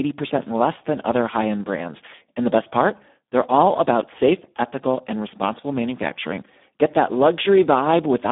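Throughout, the speech carries heavy Speex codec damage: starved CELP excitation leaves it hoarse, noisy and edging toward robotic, which fits a bitrate near 8 kbps. A spectrogram shows a telephone band from 200 Hz to 3.6 kHz, blank above 3.8 kHz, with smeared harmonics.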